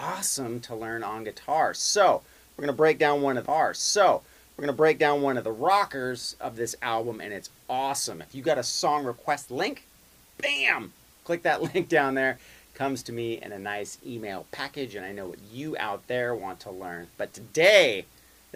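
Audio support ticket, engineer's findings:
Two seconds of programme heard twice: audio at 3.45 s jumps back and replays the preceding stretch through 5.45 s, small blip at the jump. Stream segment repeated. Player/segment queue fetched or queued the same 2 s segment again.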